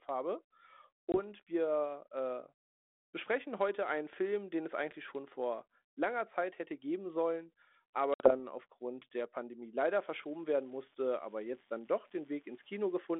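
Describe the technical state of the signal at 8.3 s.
At 8.3 s the signal is inside a packet loss on an ADPCM call spanning 8.14 to 8.35 s: about 60 ms of audio, a few packets' worth, drops to silence. The decoder's predictor then restarts out of step, so the sound returns slightly distorted. On the waveform this is a flat, hard-edged gap. The spectrogram shows a sharp blank band.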